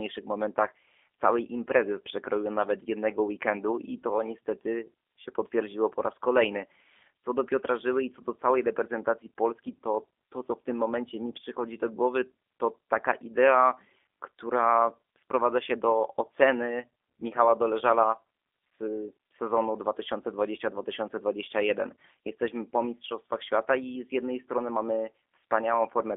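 From start to finish the speech has been through the G.729 codec, the G.729A variant running at 8 kbit/s. The band sits at roughly 300 Hz to 3.5 kHz and nothing gets through above 3.6 kHz, so the sound is narrow and boxy. The voice is rebuilt from a vocal tract filter, a pitch predictor and a handful of pulses in each 10 ms frame. That shows up plainly as a rough, slightly synthetic buzz.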